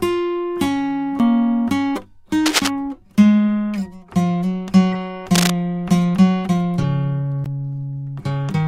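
At 1.19 s the music cuts out for a very short moment, roughly 7 ms, then resumes from a different point in the piece. This is a CD skip: the pickup laser lost its track and landed on another turn of the disc's spiral, so the player muted briefly and continued from the wrong place. It is heard as a tick and a sudden jump. On a waveform it shows as a tiny flat gap with mismatched signal on either side. On a spectrogram it is a thin vertical break.

From 2.46 to 2.68 s, and again from 5.35 to 5.50 s, bursts of scratching, rustling noise sit over the music at about the same level as the music itself. This is cable scratch noise, likely from a worn cable, connector or control being moved so that its contact resistance changed rapidly. On a spectrogram these passages appear as ragged broadband smears. The waveform shows dense, spiky, uneven bursts.

From 4.93 to 4.95 s a short glitch appears, peaking at about −20 dBFS. 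This is a corrupt frame decoded: one compressed frame carried flipped bits and was played anyway, putting energy at the wrong frequencies for the length of that frame. A second, louder instance, spread over roughly two frames, runs from 6.81 to 6.84 s and peaks at about −15 dBFS. On a spectrogram each shows as a brief block of stray energy that is out of place with the surrounding music.

At 7.44 s a second CD skip occurs. This mute is a little longer, roughly 15 ms, and is followed by the same abrupt jump to another point in the music. It appears as a short gap in the waveform with a discontinuity at the restart.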